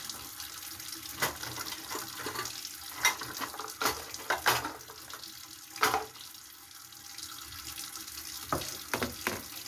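No technical faults are audible.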